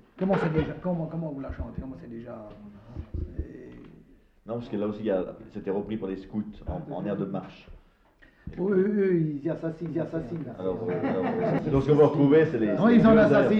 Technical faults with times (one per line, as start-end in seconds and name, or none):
9.89-11.59 doubled audio track